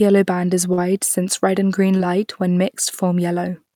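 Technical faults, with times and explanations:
0.73–0.79 s and 1.97–2.01 s, short concealed packet loss: about 40 ms after "band is" and 20 ms after "since red and green" arrived too late to decode. The receiver extended the preceding sound and blended back, leaving a brief smear or wobble.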